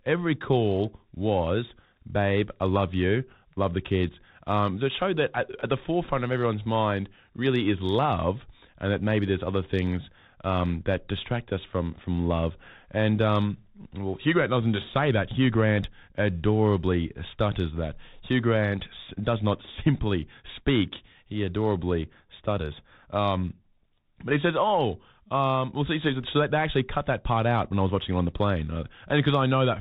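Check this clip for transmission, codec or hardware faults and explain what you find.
One fault runs through the whole recording: the speech has passed through a Bluetooth CVSD headset codec, and the damage is plainly audible.

From start to finish the speech is narrowband, with nothing above 4 kHz. Each sample is one bit, a step up or down, which fits a 64 kbps headset link. Loud high sounds outrun the adapting step and distort. Sibilants come out scratchy. A grainy hiss sits beneath the speech.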